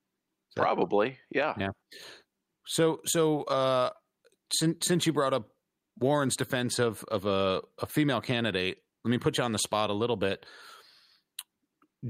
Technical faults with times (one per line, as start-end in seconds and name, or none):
none